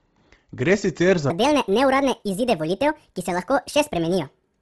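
Bluetooth LC3 compression runs through the whole clip: the speech has a breathy, grainy edge, and the upper spectrum has been discarded and partly refilled with noise. This heavy damage points to likely LC3 coding at a low bitrate, around 24 kbps.

A section at the wrong speed starts at 1.30 s, right after "sicer za", and lasts to the end. Playback runs 1.57 times too fast, likely from a wrong clock, so the speech turns hurried and rises about seven semitones.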